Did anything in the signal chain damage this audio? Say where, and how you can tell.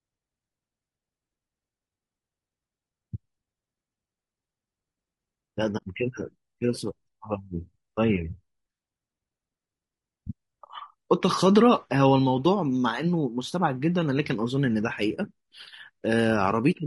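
Yes. Throughout, the speech sounds rough and grainy, with noise between the harmonics. This is codec damage, likely from low-delay AAC compression (AAC-ELD) at a bitrate consistent with about 32 kbps.

From 5.77 to 5.83 s the sound fades into a soft-edged 40 ms gap. This is AAC frame loss with muting: the decoder zeroed what fits about two lost frames, somewhere in transmission.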